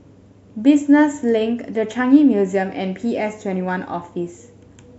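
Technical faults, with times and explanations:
No technical faults can be heard anywhere in the speech recording, and the signal stays steady and continuous throughout.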